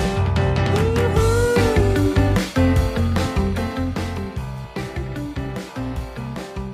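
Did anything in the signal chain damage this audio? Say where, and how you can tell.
No; nothing in the chain audibly damaged this audio.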